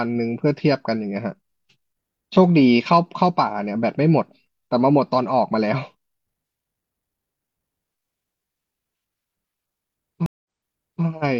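At 10.26 s the connection drops and the player has to reconnect, starting a fresh decoder partway through the stream: a stream reconnect. The speech cuts to silence for 185 ms, and when it returns it has jumped back about 0.6 s, so a short stretch of speech plays a second time, the server having resent a burst of earlier audio. The restart comes in muted or faded for its first moment, and the disturbance ends around 11.04 s.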